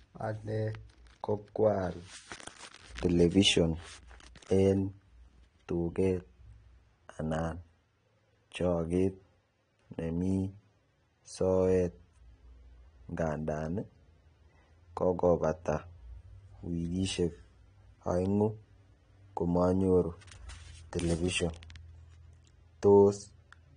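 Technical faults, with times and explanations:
Throughout, AAC compression: the speech has nothing above 9.7 kHz and plainly audible smearing, with a warbling, fizzy edge on sibilants. This likely comes from AAC-LC coding at a bitrate around 32 kbps, where the encoder discards high bands and coarsely quantises what remains.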